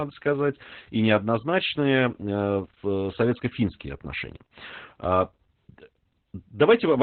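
Opus voice compression runs throughout the speech. Nothing comes through above about 4.2 kHz, a narrowband limit that points to the SILK coder at a very low bitrate, near 8 kbps. Its excitation is coded coarsely, so the speech sounds muffled, hoarse and slightly robotic.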